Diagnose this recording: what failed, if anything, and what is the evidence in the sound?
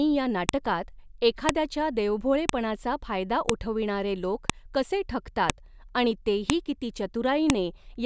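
The fault sits in storage, where separate files were joined: the file header is played as audio. Sharp clicks land at 0.49, 1.49, 2.49, 3.49, 4.50, 5.50, 6.50 and 7.50 s, each only a millisecond or two long. They arrive every 1.0 s regardless of the speech. One comes just before "फायदा उठविणारे लोक कसे", another just after "लोक कसे ठगतात आणि". Each one-second piece kept its header, and those bytes were decoded as samples.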